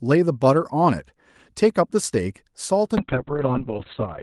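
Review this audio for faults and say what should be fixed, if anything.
From 2.99 s the speech goes muffled and rough. A call bitrate drop cut Opus from 40 to 6 kbps and its bandwidth from 12 to 4 kHz. To prevent this, set a higher minimum bitrate floor for the encoder and let bandwidth estimation recover faster, so a dip in the estimate doesn't starve the codec.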